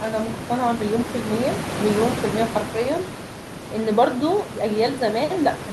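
Speech recording with no technical faults to report.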